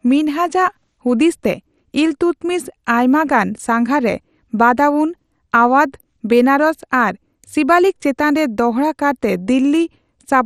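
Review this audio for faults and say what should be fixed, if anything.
MP2 compression damage runs through the whole speech clip: the sound is dull and gurgling, with granular distortion and nothing above 15 kHz. Upper sub-bands are being dropped and the remaining ones coarsely quantised, likely from MPEG Layer II encoding at a low rate, which fits about 64 kbps. Prevent it by encoding from the original source at a higher bitrate or with a more efficient codec.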